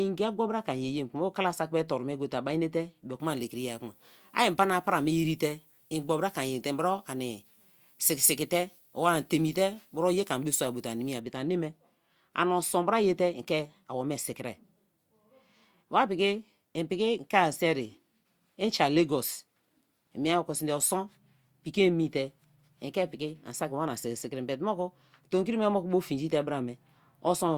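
Speech that turns thin, bright and hissy with exaggerated sibilance from 3.2 to 11.2 s, starting at "but a neme": pre-emphasis left on, an FM 75 µs treble boost never de-emphasised, about 14 dB high at 10 kHz.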